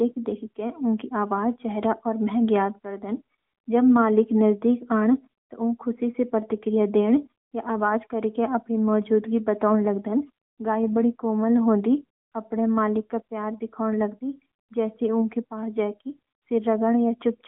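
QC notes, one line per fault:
Throughout: AMR narrowband mobile codec. The speech sits in a phone-line band of roughly 150 Hz to 3.5 kHz, so the low body and all the air and sibilance above are gone. The codec models the vocal tract and rebuilds the voice from a handful of pulses per short subframe, which gives the plainly audible buzzy, synthetic edge. That degree of damage fits an upper mode around 10.2 kbps.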